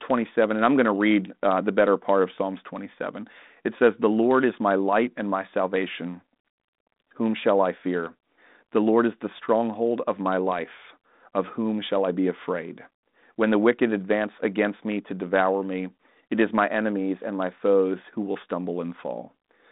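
No technical faults are audible.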